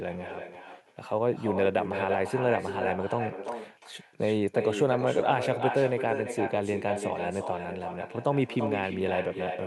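Echo with no canceller runs through the whole speech clip. Each phrase returns as a thinner copy about 7 dB quieter, trailing by roughly a third of a second. The far end's loudspeaker feeds its microphone, and nothing removes that return path.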